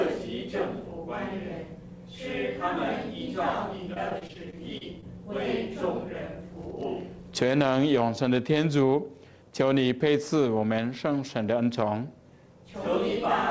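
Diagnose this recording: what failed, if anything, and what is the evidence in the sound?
Repeated packet loss (robotic sound) at the network stage, 3.94 to 5.04 s: eight short gaps, the longest 30 ms, were each filled by extending the preceding sound, so roughly an eighth of that stretch is concealment and sounds choppy. On a spectrogram, which is empty above 8 kHz throughout as expected for G.722 at 64 kbps, the gaps show as brief smeared, repeated frames with vertical seams.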